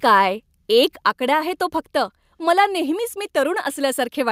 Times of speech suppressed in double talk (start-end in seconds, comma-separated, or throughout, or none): none